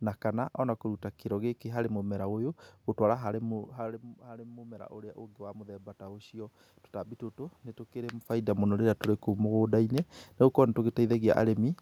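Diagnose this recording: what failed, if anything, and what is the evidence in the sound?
Automatic gain rising in the call processing: after the talker moves away around 3.5 s and input drops about 16 dB, voice and room noise swell together about 7 dB from 3.81 to 7.29 s.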